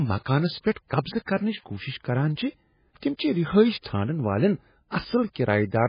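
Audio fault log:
throughout, MP3 compression: a starved encoder, likely an MP3 stream at a bitrate as low as 16 kbps, cuts everything above 5 kHz and drops weak frequency lines frame by frame, leaving the speech dull, watery and swirling, with heavy smearing of consonants.
1.25–1.28 s, pre-echo: quantisation noise spread across a transform block leaks into the quiet stretch before a sharp onset, so a short hiss of about 31 ms comes just ahead of "کرنٕچ کوشش کران", and that attack sounds soft and smeared.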